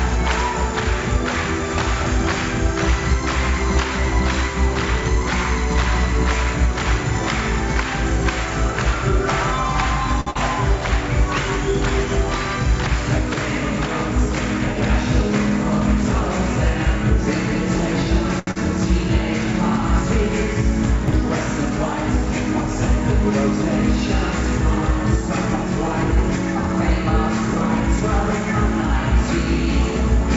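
Audio carried over a WebRTC call path, band-limited at 8 kHz in a way that points to G.722 at around 64 kbps, shows four kinds of network fault. A short stall from a late packet occurs at 10.21–10.28 s and again at 18.39–18.49 s: the last sound is held for 58 ms and then 77 ms while the jitter buffer waits, and nothing is lost afterwards. A burst of packet loss at 10.30–10.37 s is different because the 47 ms of held, fading sound is followed by a 40 ms skip ahead. A short concealed packet loss at 18.51–18.57 s fills 42 ms with a brief smear, yet 80 ms of real audio is gone, as the buffer sheds roughly 40 ms of delay. At 21.08–21.14 s, chunks out of order place a 20 ms chunk two chunks late, giving a jumbled moment with hard joins but no missing or stretched material.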